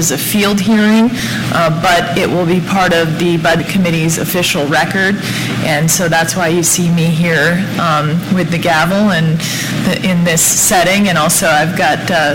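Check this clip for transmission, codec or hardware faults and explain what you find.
Two frame-skip faults are present. Compressed frames skipped at 1.19 s and from 3.59 to 3.62 s: each time the audio jumps ahead by around 70 ms, which points to a few missing 20 ms frames. The join comes through as a brief blip or a click, not a silent gap.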